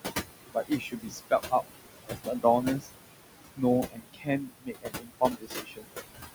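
Throughout the clip, the noise suppressor pulls the room noise (about 7 dB below the speech) down by about 19 dB frame by frame, producing noise suppressor artifacts: background that ducks and swells.

The suppressor also mistakes parts of the speech for noise and cuts them, at 0.54–1.32 s (up to about 20 dB, roughly half a second affected), 2.06–2.45 s (about 16 dB), 2.80–2.93 s (about 21 dB) and 3.83–5.86 s (about 22 dB, around a second and a half). Those stretches sound swallowed and faint.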